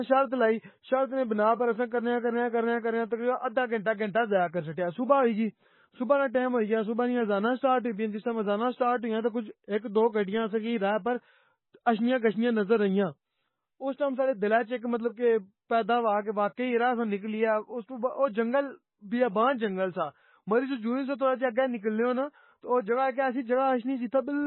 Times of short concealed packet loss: none

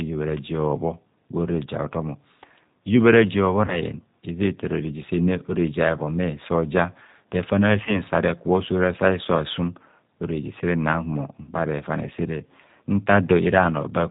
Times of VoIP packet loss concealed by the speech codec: 3.66-3.80, 7.85-7.99

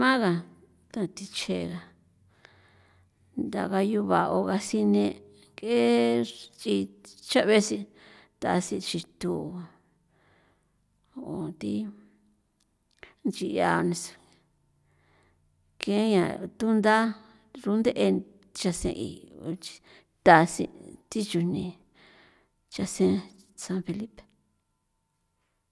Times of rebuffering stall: none

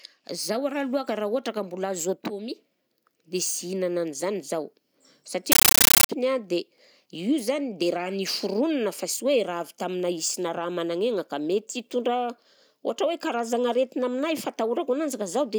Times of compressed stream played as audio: 5.52-6.09

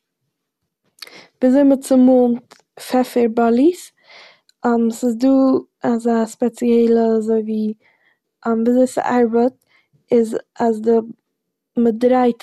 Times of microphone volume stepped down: none

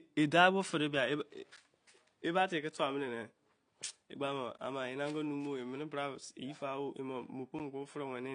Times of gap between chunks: 1.56, 4.57

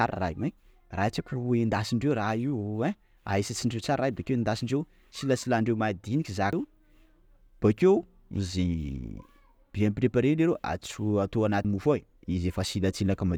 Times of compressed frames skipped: 6.53, 11.65

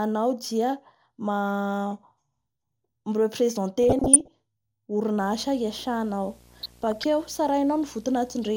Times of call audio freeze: none

